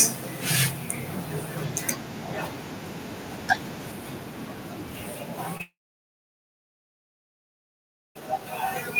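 A speech recording with a brief smear at 5.57–5.61 s, where short concealed packet loss left a 20 ms gap that the receiver patched by extending the preceding sound. From 5.61 s the audio trails into a fading buzz or hiss and then about 2.4 s of silence until speech resumes at 8.22 s, without the missing portion. This is likely a long network dropout, where nothing arrived and concealment faded out.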